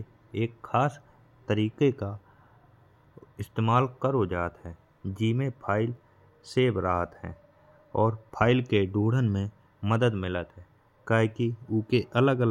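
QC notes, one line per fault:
5.29–6.15 s, block size mismatch (truncated): buzz at about 46.9 Hz from each block's tail being discarded, which fits 1024-sample writes; tempo and pitch stay normal.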